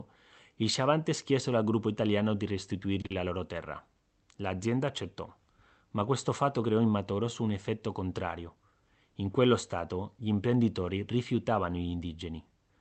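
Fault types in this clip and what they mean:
Short stall from a late packet: At about 3.01 s a packet arrived late and the jitter buffer ran dry, so the receiver held the last sound for about 30 ms until it came, then resumed exactly where it had stopped. Nothing is lost. The sound is simply drawn out, with a slight buzz or dip, and everything after it sits about 30 ms later. That distinguishes it from a loss, where the audio is actually gone.
Short concealed packet loss: Immediately after the stall, from about 3.06 to 3.12 s, 40 ms of audio never reached the decoder. The receiver filled the gap by extending the preceding sound and then blending back into the real signal, which gives a brief smear or wobble. Unlike the stall just before it, the speech does not resume where it left off. Those 40 ms are missing, so a short sound inside them can disappear.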